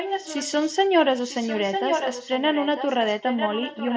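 An echo leak, likely from a loudspeaker on the far end whose echo canceller let part of the speech back into its microphone. From 0.0 to 0.68 s and again from 1.22 s to the end, a copy of the speech returns 0.95 s late, about 5 dB quieter than the original.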